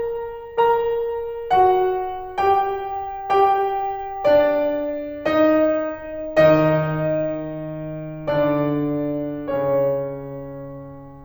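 Nothing goes wrong anywhere in this music clip, so there's simply no technical fault to point to.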